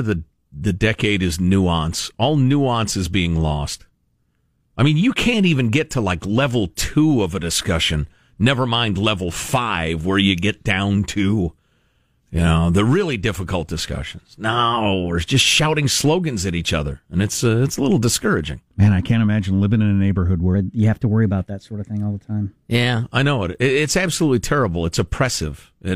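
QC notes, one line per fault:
20.55–23.03 s: section at the wrong speed. The speech runs 1.12 times fast, hurried and roughly two semitones high, likely from playback against the wrong clock. A spectrogram shows harmonics stepping upward at the start and back down at the end; waveform cycles look tighter throughout.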